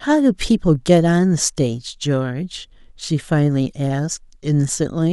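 No technical faults can be heard anywhere in this speech recording. Nothing in it calls for a timestamp or any further comment.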